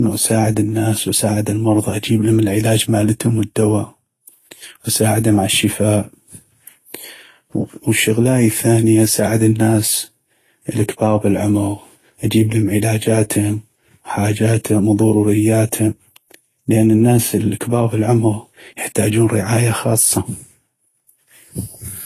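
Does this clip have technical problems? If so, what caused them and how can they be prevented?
Yes. Throughout the speech, two layers of coding artefacts are heard together: the artefacts of one codec and those added by another. Nothing remains above 14.2 kHz. This is likely transcoding between lossy codecs, which fits low-bitrate HE-AAC re-encoded to Vorbis at a similarly low rate. On a spectrogram, a flat ceiling sits at 14.2 kHz with patchy, blocky energy below it. To prevent it, encode only once, directly from the uncompressed original, rather than converting one lossy file into another.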